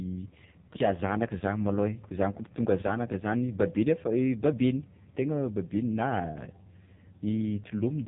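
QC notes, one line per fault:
Throughout: AMR narrowband mobile codec. Speech sounds heavily buzzy and synthetic, and nothing passes above 3.8 kHz; damage this heavy fits a low AMR-NB mode near 5 kbps, leaving the vocal-tract model with too few pulses.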